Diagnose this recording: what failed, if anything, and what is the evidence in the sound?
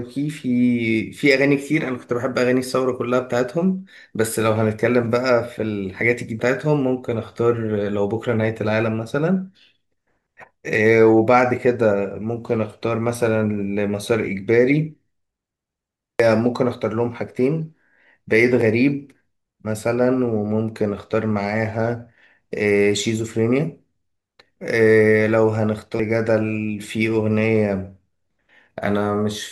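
Three abrupt skips in the speech, at 6.40, 16.20 and 26.00 s, each dropping about a fifth of a second with the two sides butted together and no gap of silence. The spacing is exactly regular, 9.8 s apart, which points to audio missing between chunks, likely at the recorder's driver or buffer stage as it closes each 10-second chunk and opens the next. Network packet loss would land irregularly and be shorter.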